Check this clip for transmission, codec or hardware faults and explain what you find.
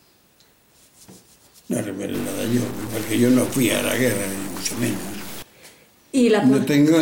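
One fault stands out: a stuck bit from 2.14 s to 5.42 s. For that span, one data bit appears to hold a fixed value, likely from a broken data line or converter fault. Roughly half the samples land off by that bit's weight, a step of about -30 dBFS, in a pattern that follows the waveform. The result is distortion laid over the sound, and quieter moments fill with noise because the bit keeps flipping with the sign of small values.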